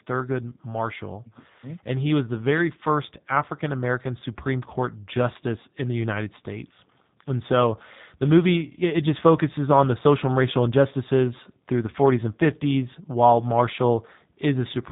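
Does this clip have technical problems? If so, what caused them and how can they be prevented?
Yes: G.729 codec damage throughout, nothing above 3.8 kHz, with rough, synthetic speech that fits 8 kbit/s pulse-based coding. A spectrogram shows a flat ceiling at 3.8 kHz. Prevent it by using a wideband codec such as Opus.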